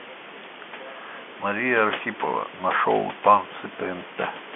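No technical faults can be heard: the speech carries the narrow band of G.711 mu-law telephone coding, about 200 Hz to 3.4 kHz with nothing above 3.7 kHz and at most a faint trace of its coding noise, over room noise that sits about 10 dB below the speech.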